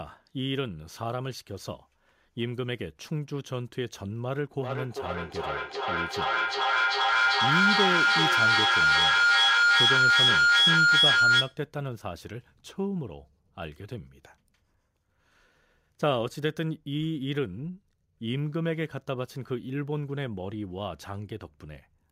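Feedback howl runs from 4.59 s to 11.66 s: the loop between a microphone and a nearby loudspeaker adds gain each pass, so the speech smears into a tone near 1.5 kHz. It pulses roughly every 0.4 s and peaks about 8 dB above the voice.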